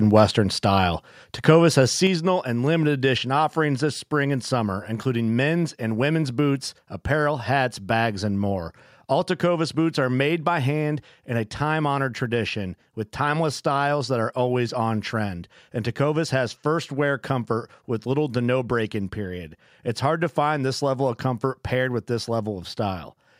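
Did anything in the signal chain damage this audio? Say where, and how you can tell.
Yes. A microphone volume stepped down fault occurs twice, at 1.02 s and again at 2.07 s. Both the speech and the background drop together, first by about 2 dB and then by about 5 dB. The fault sits at the call-processing stage. The likely cause is the call software's input gain control judging the microphone too hot and cutting the device's input volume in a single step each time.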